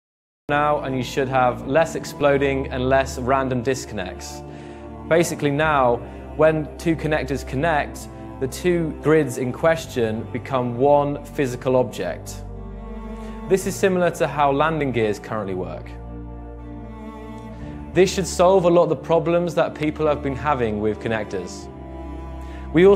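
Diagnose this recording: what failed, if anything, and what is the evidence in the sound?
The clip opens on silence for the first 0.49 s, then the sound arrives at 0.49 s with no attack or fade-in, as if already under way. This is a cut-off start, and the failure sits at the capture or storage stage. Recording or streaming began late, after the sound source was already active. The material before 0.49 s was never captured, so the opening is silence followed by an abrupt entry partway through an ongoing sound.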